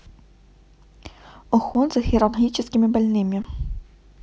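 At 1.74 s and again at 3.43 s the speech hits an underrun with held sample: the output buffer ran dry, so the waveform freezes flat for 10 ms, then 20 ms. That bit of live audio is simply gone.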